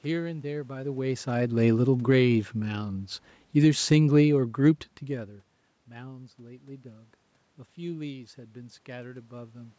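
From 3.46 s to 4.81 s the automatic gain is falling: the gain control judged the incoming level too hot or its background noise too strong, and eased its gain down by about 4 dB over that stretch. The speech sinks gradually, and the room noise sinks with it. That shared drop separates it from the talker moving, as around 5 s, where only the voice changes level while the background holds steady.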